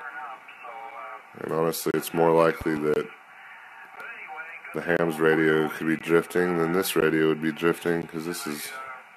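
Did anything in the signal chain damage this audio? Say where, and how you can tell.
Yes. Gaps between stream segments at the playback/network stage: hard-edged silences at 0.91 s, 1.91–1.94 s, 2.94–2.96 s, 3.96 s, 4.97–4.99 s, 5.99 s, 7.00 s and 8.02 s, each lasting about 6 to 27 ms. Their one-second spacing matches segment boundaries whose timestamps leave holes that the player fills with silence. On the waveform these are flat silent stretches, and on the spectrogram thin vertical blank stripes.

A loud pop, actually two pops in quick succession, sits between 2.61 and 2.79 s, peaking a few dB above the sound while the audio continues underneath. It is likely a voltage step in the analogue wiring or driver. The waveform shows sharp spikes, and the spectrogram shows full-band vertical lines.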